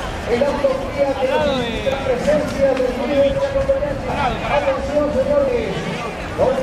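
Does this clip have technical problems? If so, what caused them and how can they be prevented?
Yes. At 0.32, 1.92 and 5.48 s the sound jumps forward by roughly 40 ms with no gap, most likely a dropped buffer (overrun): samples were overwritten before being read. Unlike stream damage, there is no tonal squawk. Larger buffers or higher-priority capture threads prevent it.

From 4.08 to 4.10 s and 6.48 to 6.50 s brief glitches appear, the mark of damaged data in a compressed stream, where the decoder misreads corrupt frames and resyncs. Checksummed, reliable transport and storage prevent it.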